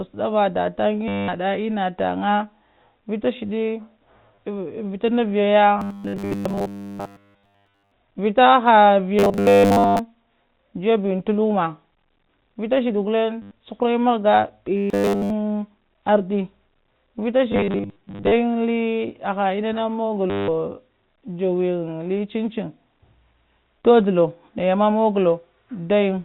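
Packet loss with the last packet repeated strikes first at 1.08 to 1.28 s: 200 ms of audio goes missing and the receiver keeps replaying its final packet, which fits 10 ms packets. The loops merge into a stiff 100 Hz stutter. A shorter 30 ms gap follows at 4.35 to 4.38 s.

From 5.79 to 7.92 s, just before "vita ha", the sound turns into robotic sound from repeated short buffers. This is likely because fresh audio stopped arriving and a roughly 10 ms buffer was looped in its place, with almost none of the real audio getting through. That imposes a fixed 100 Hz metallic buzz. The same buzz returns at 9.19 to 9.99 s, right after "vita ha".

Packet repetition recurs at 13.42 to 13.51 s, a 90 ms hole. The rigid 100 Hz buffer buzz comes back at 14.77 to 15.30 s. From 17.52 to 18.32 s, 510 ms is lost in scattered runs of up to 50 ms across 800 ms, giving a choppy, repeatedly stuttering stretch. 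The last dropout comes at 20.30 to 20.48 s, just after "aha enna", where 180 ms is replaced by a looped, buzzing packet.

All of this sits within the narrow telephone band of G.711 A-law coding.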